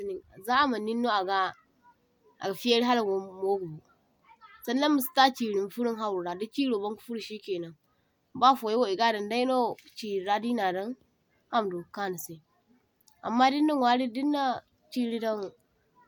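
No technical faults can be heard anywhere in the speech. There is no moment in the recording that calls for a time mark.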